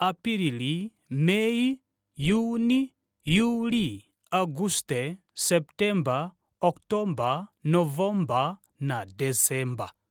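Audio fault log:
No faults logged; the speech runs through Opus voice compression at 24 kbps in hybrid mode, fullband with content reaching about 20.3 kHz and only light coding damage.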